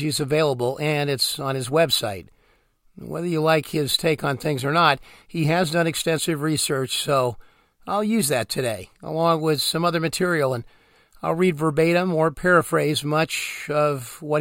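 No technical faults can be heard anywhere in the recording; the signal stays continuous and stable throughout.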